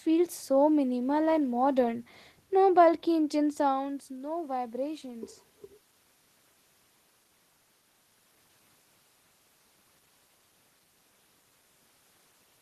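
From 3.38 to 5.38 s the voice and the room noise behind it swell upward together, slowly over those two seconds. This is automatic gain rising. Around three and a half seconds the talker moves away from the microphone, and the input falls by about 12 dB. The gain control reads that as too quiet a signal and lifts its gain by about 4 dB, bringing the background up along with the speech.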